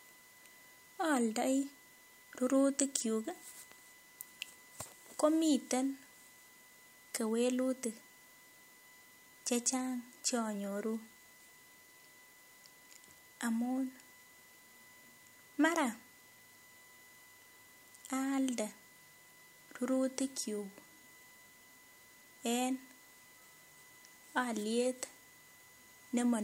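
Right from the start there's USB whine, a steady 1 kHz tone peaking at its 2 kHz harmonic, sitting roughly 30 dB under the speech, with bus frame current leaking in through the power or ground. At 16.32 to 16.38 s, chunks out of order: a 21 ms block plays two chunks late, giving a brief jumbled stutter.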